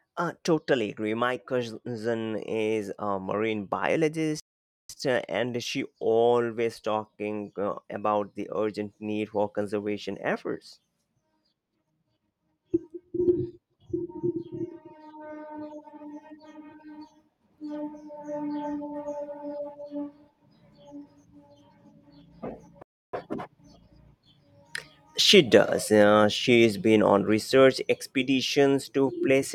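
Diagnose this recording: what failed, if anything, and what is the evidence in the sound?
The speech cuts to silence mid-flow twice, from 4.40 to 4.89 s (about 495 ms) and from 22.82 to 23.13 s (about 309 ms). This is a playback stall, likely the player's buffer running dry or its thread blocking. The silence interrupts the speech mid-flow, unlike a natural pause.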